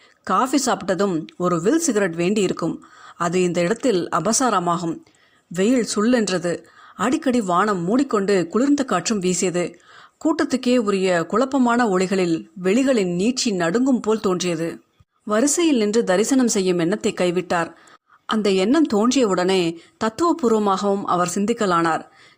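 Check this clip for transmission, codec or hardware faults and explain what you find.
The speech signal stays steady and continuous, and no fault can be heard anywhere in it.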